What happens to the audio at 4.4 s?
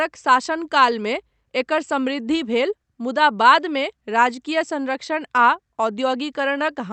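Nothing goes wrong at 4.4 s: the speech there passes intact through the call path, with only the ordinary coding of an Opus call.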